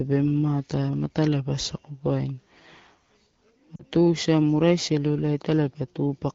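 At 3.76 s the speech briefly smears and thins for about 70 ms before snapping back a little rough. These are lost AMR speech frames: the wideband decoder, otherwise coding clearly at 12.65 kbit/s, filled roughly 40 ms of failed frames, which fits two 20 ms frames, with fading, repeated parameters.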